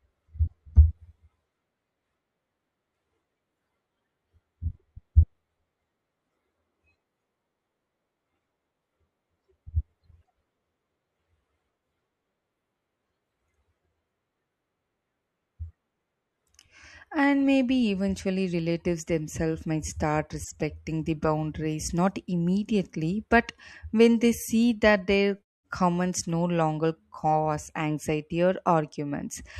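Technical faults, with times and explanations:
No technical faults can be heard in the speech. During the pauses the background falls away to silence and comes back in time for the next sound, so only very quiet sound is lost.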